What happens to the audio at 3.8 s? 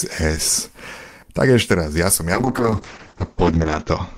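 At 3.8 s the sound is dull and coarsely coded. Everything above 8 kHz is gone, and the detail below that is rendered more crudely. This is a call bitrate drop that starts at 2.35 s and lasts to the end of the clip. The call's bandwidth estimate fell, so the encoder went from about 48 kbps to about 7 kbps and narrowed its coded band from 20 kHz to 8 kHz. The bitrate never recovers, so the degradation is still present at 3.8 s.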